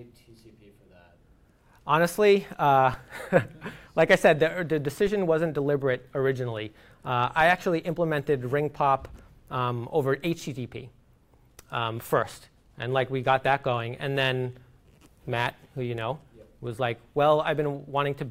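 At 2.94 s and again at 5.07 s the waveform's zero line jumps by about -26 dBFS, a DC step from a sudden offset shift. Each lands as a brief low thump, and the offset then bleeds away through a 20 Hz high-pass while the sound continues unaffected.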